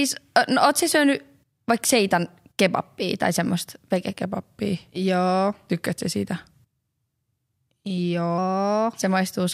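From 4.22 s to 8.38 s the speech has a wrong sample rate fault. The samples run at about 0.919 of their proper speed, which fits 48 kHz material played back at 44.1 kHz with no conversion. The voice drops about 1.47 semitones and slows by the same ratio, only slightly, as expected between such near rates. Pitch and tempo shifting together in lockstep is what sets this apart from a pitch shift or time-stretch, which alter only one.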